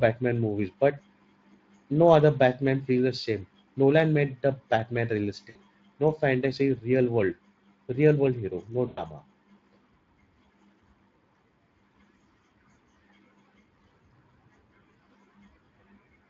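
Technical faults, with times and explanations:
Throughout: Speex codec. The speech is plainly coded. It sounds hoarse and grainy, because the CELP coder has few bits to rebuild the excitation. The damage points to a setting around 20 kbps.
5.49 to 5.57 s and 8.87 to 9.02 s: VoIP packet loss concealed by the speech codec. The gaps are 60 ms and 100 ms, the second just after "real world hero no". The decoder repeats its last pitch and filter and fades them. You hear the sound stretched and decaying, and the voice stays weak briefly afterwards.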